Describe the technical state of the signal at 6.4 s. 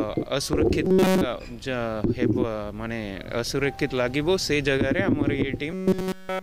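At 6.4 s the sound has collapsed into a rigid, metallic buzz pitched near 188 Hz, the robotic sound from repeated short buffers that runs from 5.71 s to the end at 6.43 s. All of that stretch is repetition rather than fresh audio. The likely cause is new data arriving too seldom, so playback keeps looping a fragment of about 5.3 ms while the real signal is skipped, and that loop length fixes the buzz pitch.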